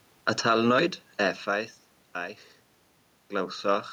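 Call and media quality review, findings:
No system fault found; room noise and level shifts around one and a half and three seconds, where the talker moves relative to the mic, are acoustic and not a transmission issue.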